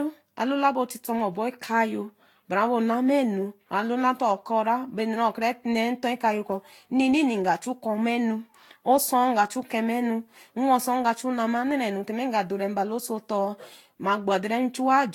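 Throughout the speech there is generation loss: swirly, hollow smearing and blurred attacks, worse than one lossy pass would cause, likely from roughly seven successive re-encodes.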